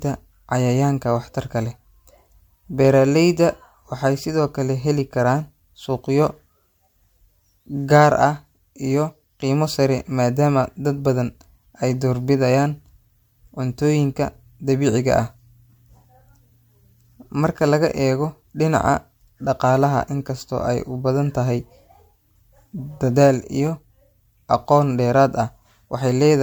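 Generation loss runs throughout, likely from about four MP3 re-encodes; each pass requantises on a shifted frame grid, leaving the speech swirly, hollow and smeared, with blurred attacks.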